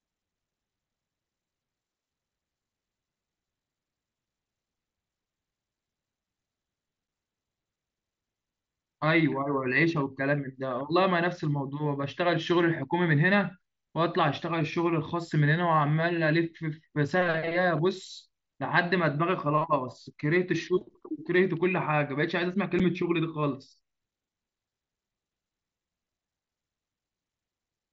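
Unconcealed Bluetooth headset packet loss occurs at 7.08 s and again at 22.79 s. Each time, one voice packet travelling between headset and phone failed to arrive, and the receiver filled the gap with silence or an idle pattern instead of smoothing it over. The result is a brief hole of about 7.5 ms, which fits a single lost frame, cut into the speech with hard edges. Outside these holes, the wideband mSBC link carries the speech with only a faint grain.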